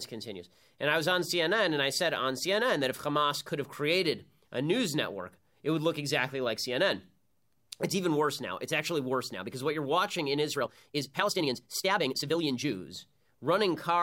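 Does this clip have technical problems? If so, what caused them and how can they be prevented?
Yes: a time-stretched section from 10.52 to 12.72 s, likely caused by software squeezing this stretch of speech to fit a shorter length, dropping short slices to hold pitch. The pace jumps to about 1.58 times normal, sounding rushed while pitch stays unchanged. Prevent it by editing or trimming to length instead of compressing the audio in time.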